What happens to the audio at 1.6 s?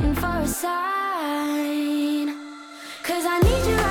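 Nothing goes wrong at 1.6 s; the audio there carries on intact, with no dropout, click or other fault.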